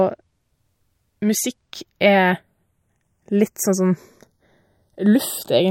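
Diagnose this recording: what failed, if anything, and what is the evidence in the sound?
Channels drifting apart throughout: separately clocked converters, roughly 50 ppm off, let the gap creep to well under a millisecond, so mono sounds slowly flanged.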